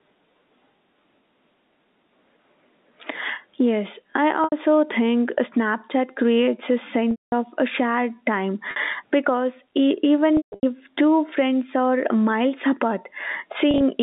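Throughout the speech, the input gain sits far too high and a fast limiter or compressor is likely clamping it down on every loud syllable. This is gain pumping: the level swings by roughly 20 dB, leaving loud and quiet passages squashed toward one level, all within the narrow telephone band of the G.711 line.

Packet loss with pitch repetition follows. The receiver fills each gap by looping the last pitch period and fading it out. The short gaps give a brief held, buzzy tone: 80 ms at 4.44 s, 50 ms at 8.71 s, and 70 ms scattered over about 120 ms at 13.71 s. The longer gaps fade to silence before the speech cross-fades back: 210 ms at 7.11 s, and 240 ms scattered over 260 ms at 10.37 s, with the longest run lasting 150 ms.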